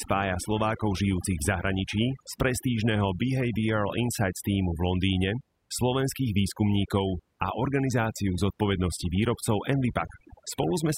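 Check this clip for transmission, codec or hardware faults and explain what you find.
From start to finish, the background collapses into near silence dotted with twinkling specks. That is overdone noise removal: a suppressor set too aggressively shuts off individual frequency bands near its noise estimate, dragging quieter parts of the speech down with them.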